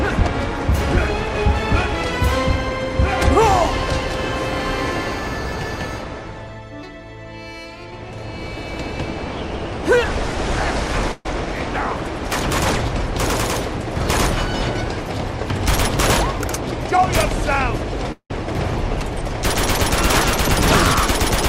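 At 11.12 s there's a burst of packet loss running to 11.27 s. About 140 ms never made it, and the receiver stretched the last bit of sound over the gap, fading it out as a held buzz or hiss before the audio picks up further along.

Then at 18.12 s, through 18.32 s, the sound hangs and smears into a fading tail for most of that stretch, with the last roughly 80 ms going silent before it resumes, about 180 ms further on. That's likely a long network dropout.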